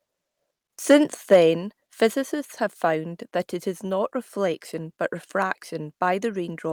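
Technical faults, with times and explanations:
2.34 s, microphone volume stepped down: the speech and the background beneath it drop together by about 3 dB in a single step, just before "have found that it", and stay at the lower level. Because everything in the pickup falls at once rather than fading, the change sounds like a sudden move of the input level. The likely cause is the call software judging the microphone too hot and lowering the device's input volume in one step.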